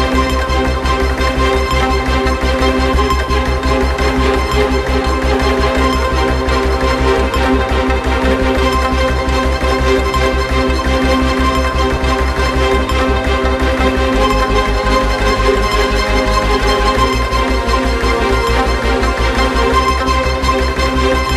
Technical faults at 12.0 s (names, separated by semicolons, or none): compressed frames skipped